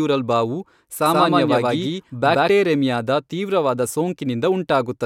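From 1.06 s to 2.50 s the speech carries a doubled audio track: a second full-band copy runs around 150 ms behind the original at roughly equal loudness. The copy has no decay or room colour, so it reads as a hard repeat, not an echo, and it cuts in and out abruptly at both boundaries. The likely cause is the signal being picked up again through a slower path and summed with the direct feed.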